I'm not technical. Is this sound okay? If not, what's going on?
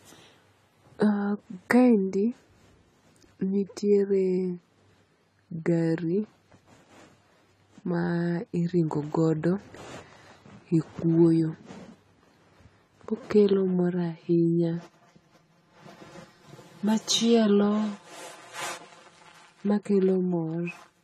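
No. The speech sounds dull and smeared throughout, with nothing above about 14 kHz. The likely cause is AAC compression squeezing the file too hard.

From 13.53 s to the end, it turns hollow and phasey. This is channel delay (comb filtering): one side arrives about 5 ms late, and combining them cancels certain tones.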